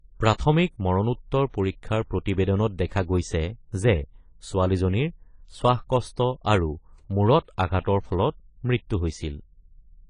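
A speech recording, and the codec damage is plainly audible the whole way through. Nothing comes through above 10 kHz, so the top end sounds dull and the sibilants come out smeared and fizzy. That pattern is likely AAC compression, specifically AAC-LC at a low rate: the encoder drops the high band and thins out what's left to save bits, which fits something around 24 kbps. There's also a pre-echo from about 7.80 to 7.85 s, a short hiss running for roughly 49 ms just ahead of a sharp onset. The attack landed late in a transform block, and the quantisation noise sized for that loud moment got spread across the whole block, including the quiet stretch before it. That's why the transient sounds softened rather than crisp.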